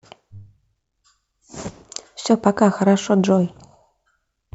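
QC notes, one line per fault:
No technical fault can be heard anywhere in the signal, so there is nothing to log.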